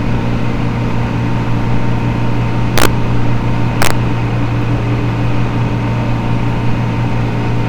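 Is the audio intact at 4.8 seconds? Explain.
Yes, the audio is intact at 4.8 seconds, with no dropout, click, distortion or other technical fault at that moment.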